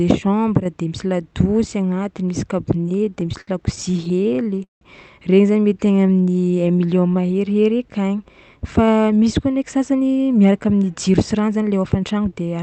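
Speech carried over a WebRTC call path, with Opus coding that keeps the band to about 8 kHz, and four jitter-related faults on top. From 2.77 to 4.83 s there are repeated stalls (stutter): packets arrived late again and again, so the receiver stretched the last sound across 25 holes totalling 470 ms, the longest 173 ms, about 23% of the stretch. Nothing is lost, but the speech halts and drags in uneven jerks. A jitter buffer slow-down runs from 5.62 to 7.77 s. Here the buffer was rebuilding its reserve by repeating single pitch periods, adding 248 ms and playing at 89% speed. Unlike the stutter, the stretching is smooth and the pitch is unchanged, so sounds are drawn out rather than broken. Inside that stretch, from 5.87 to 7.19 s, scattered short gaps appear. About ten isolated packets went missing, each patched over roughly 10 ms, around 100 ms in all. These come through as brief ticks or tiny smears, far too short to register as stalls. 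Finally, a jitter buffer speed-up runs from 9.48 s to the end. With too much audio queued, the receiver cut short pitch-period pieces, roughly 300 ms in total, giving 111% speed. The speech sounds hurried while its pitch stays put, which marks it as time-compression rather than a pitch or sample-rate shift.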